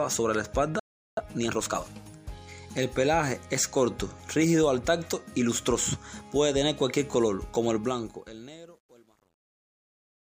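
Playback stall, 0.79 to 1.17 s: the sound stops mid-flow and the output sits silent for about 0.38 s before resuming. The likely cause is the player starving for data or having its audio thread blocked, so nothing reached the output until it recovered. It is a clean hole in the sound, and it is long enough to feel like the playback froze rather than a brief dropout.

Time-compressed catch-up, 1.17 to 1.91 s: right after the stall, the player works off its backlog by running at about 1.5 times normal speed. Because it does this by cutting out small slices and cross-fading the remaining pieces together, the pitch stays normal while the timing is squeezed. The result sounds hurried for about 0.74 s, until the player is back in step and playback settles.

Truncation distortion on a fade, 7.76 s to the end: in the fade-out that begins around 7.8 s, the volume stage applying it keeps too few bits, consistent with about 10-bit resolution, and adds no dither. 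As the level drops toward the smallest step, the waveform collapses into a few coarse square steps. From about 8.41 s the tail turns gritty instead of fading cleanly away.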